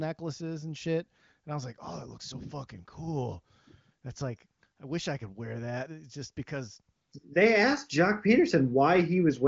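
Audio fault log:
No fault to log in this audio.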